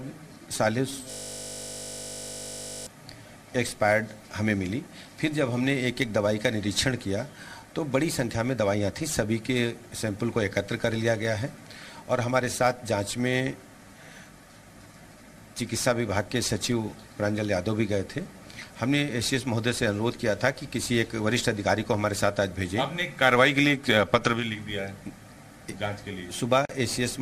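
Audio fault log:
1.11–2.87 s, system hang loop: the sound abruptly locks into a steady, hard-edged buzz with a 50 Hz fundamental, holding for about 1.8 s before normal playback returns. That tone is one 20 ms slice of audio repeated exactly, over and over. The computer or its audio driver stalled and stopped supplying new samples, while the output hardware kept reading the same small ring buffer. The loop length fits a 20 ms buffer, and a loop that short repeats quickly enough to fuse into a buzz rather than an audible stutter.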